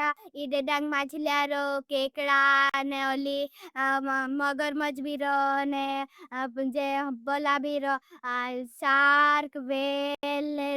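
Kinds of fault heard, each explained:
Bluetooth stall: The speech cuts to silence twice, for about 44 ms at 2.70 to 2.74 s and for about 84 ms at 10.15 to 10.23 s, then carries on. That kind of brief dropout is likely a wireless hiccup, where interference delays packets on their way to the headphones, the small playback buffer empties before the retransmissions arrive, and the audio simply stops until the data catches up.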